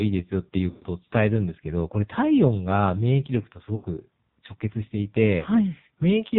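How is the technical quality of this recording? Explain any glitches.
Quality is poor. Heavy AMR narrowband mobile codec damage runs throughout, plus one dropout from lost speech frames.

Throughout, the AMR narrowband mobile codec cuts everything above 4 kHz. The buzzy, synthetic voice suggests a very low rate, consistent with AMR-NB near 5.9 kbps.

From 0.70 to 0.84 s, lost AMR speech frames leave a gap of about 120 ms. The decoder repeats its last good settings at fading gain, so the speech smears and fades out.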